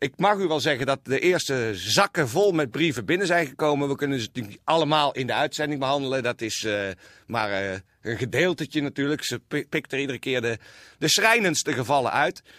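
A speech recording with no technical faults to point to. Nothing in it calls for a time or a cause.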